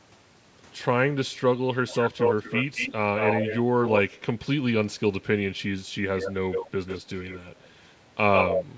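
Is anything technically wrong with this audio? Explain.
Yes. Echo leak occurs three times in this speech, from 1.88 to 4.01 s, 6.19 to 7.67 s, and 8.33 to 8.64 s. The far end's echo canceller, likely on a loudspeaker call, let through part of what its microphone caught. The result is a delayed copy of the voice, trailing by about 214 ms in the first stretch and 144 ms in the later two. That copy is roughly as loud as the speech itself, and a little quieter in the middle stretch.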